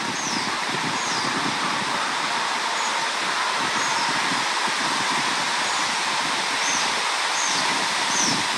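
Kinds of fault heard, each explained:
No faults can be heard.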